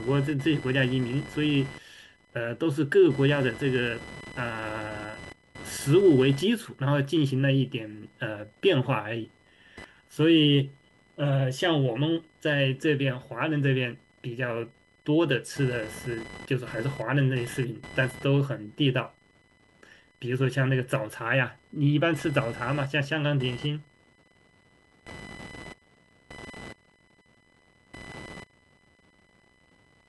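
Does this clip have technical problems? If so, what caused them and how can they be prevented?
Yes. Computer activity noise runs throughout the speech recording. Changing load on the processor, graphics card or mouse shifts the ground that the computer shares with the audio circuit, and that fluctuating ground current gets into the signal. The result is a buzzing, chirping texture pulsing at around 1 kHz, sitting roughly 20 dB below the speech. It rises and falls with what the computer is doing, not with the speech. To prevent it, use an external USB or interface with proper isolation, or a ground-loop isolator, instead of the computer's onboard audio input.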